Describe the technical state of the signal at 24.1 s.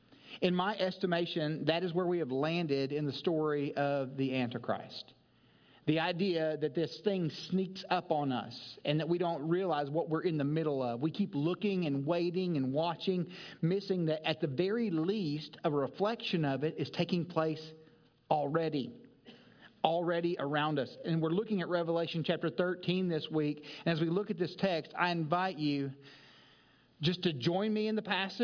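At 24.1 s the signal is intact, with no dropout, distortion, glitch or other technical fault audible.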